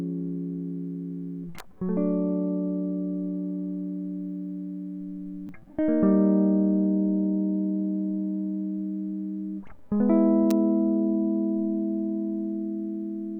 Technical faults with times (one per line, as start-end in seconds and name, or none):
1.58 electrical switching spike
5.47-5.49 repeated buffer
10.51 electrical switching spike